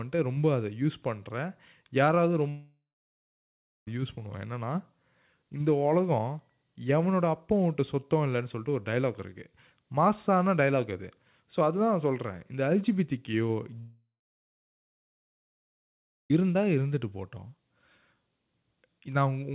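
At 2.49 s the speech breaks off. The last sound gets stretched into a buzzy tail that fades, then there's about a second of dead silence before speech returns at 3.88 s with roughly 1.4 s simply gone. The same thing happens again from 13.80 to 16.34 s, this time about 2.5 s lost and around 2.2 s of silence after the fade. Both are likely long network dropouts, with the receiver concealing briefly and then giving up. Throughout, nothing comes through above 4 kHz, which fits a G.711 mu-law call path.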